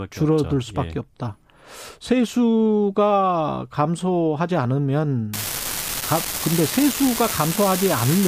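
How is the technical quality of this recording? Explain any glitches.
From 5.33 s to the end at 8.28 s, a steady crackle and fizz sits over the speech and continues through the pauses. This is an unreliable data bit: one marginal data line flips at random, and each error adds an identical spike of about -9 dBFS.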